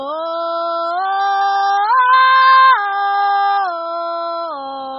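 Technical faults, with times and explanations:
throughout, MP2 compression: the music sounds dull and muffled, with nothing above 7.5 kHz, and a gurgling, granular roughness runs through it as the upper bands flicker in and out. The likely cause is MPEG Layer II coding at a starved bitrate, which fits something near 16 kbps. The encoder splits the spectrum into 32 sub-bands, cannot afford bits for the top ones and switches them off, then quantises the remaining bands so coarsely that the damage is heavy.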